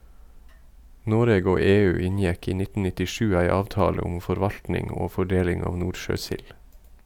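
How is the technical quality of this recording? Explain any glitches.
Nothing in this speech recording stands out as a glitch, so there's nothing here that needs explaining.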